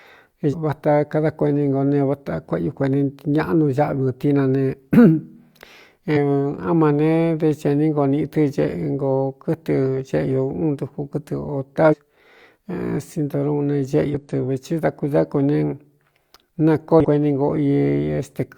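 Speech interrupted by five brief chirps or blips, at 0.49–0.55 s, 6.12–6.18 s (just before "á ma"), 11.88–11.95 s, 14.10–14.15 s and 17.00–17.05 s. These come from damaged data in a compressed stream: corrupted bytes make the decoder misread frames and lose sync until it finds the next valid header.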